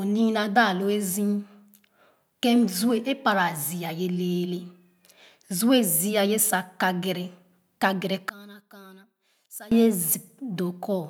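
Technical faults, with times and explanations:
8.29 to 9.72 s, one channel inverted: the speech abruptly falls by about 21 dB. The centred body of the voice and its low end almost disappear, leaving a faint residue until full level returns. The likely cause is reversed polarity on one stereo channel. When the two sides are summed to mono, the material they share cancels, and only the small difference between them survives.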